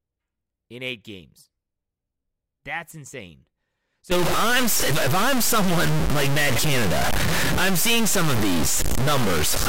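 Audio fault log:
4.11 s to 9.68 s, stuck bit: From 4.11 s to the end, one data bit is likely held at a fixed value by a broken data line or converter. About half the samples jump by that bit's weight, a step of about -15 dBFS, in a pattern that follows the speech waveform, so the sound turns harsh and buzzy. Because the error flips with the sign of small values, pauses fill with loud noise instead of falling quiet.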